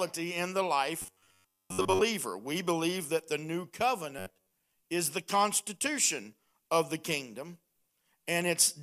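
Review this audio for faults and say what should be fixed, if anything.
Robotic sound from repeated short buffers occurs at 1.02–2.01 s, after "in the", and at 4.19–4.53 s, between "believe that the new" and "is the constitution of". A rigid, metallic buzz near 94 Hz replaces most of the real audio. That pitch fits an 11 ms chunk being replayed, likely because audio arrived late. A larger input buffer would prevent it.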